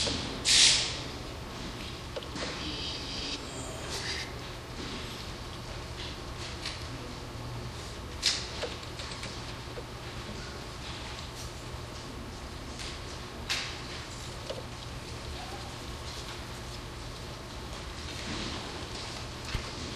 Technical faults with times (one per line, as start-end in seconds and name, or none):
none